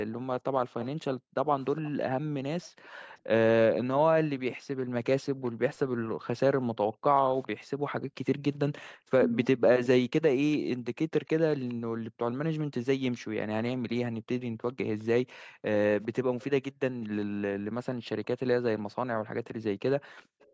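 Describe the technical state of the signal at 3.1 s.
At 3.1 s the echo canceller is gating the background, as it does intermittently from 0.1 to 20.5 s. While the far-end loudspeaker plays, it pulls the microphone down hard, by about 40 dB at its deepest, so the room tone dips or vanishes for moments totalling around four seconds.

An echo leak runs from 0.81 to 7.48 s, likely from a loudspeaker-side canceller failing to remove what its microphone picked up. A faint delayed copy of the speech, trailing by 410 ms and well below the direct sound, gets sent back.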